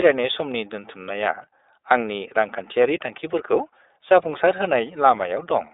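Throughout the clip, the speech has passed through the iLBC codec, which coded each frame's excitation independently, with a texture that fits 30 ms frames at about 13 kbps. Nothing survives above 3.8 kHz, so it sounds plainly rough, slightly synthetic and band-limited.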